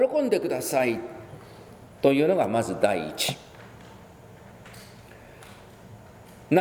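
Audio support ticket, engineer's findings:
Audio missing between chunks, likely at a 3 s chunk boundary: a short piece, about 20 ms, dropped while one chunk closes and the next opens. Heard as a single abrupt skip at 4.67 s, both sides butted together with no gap.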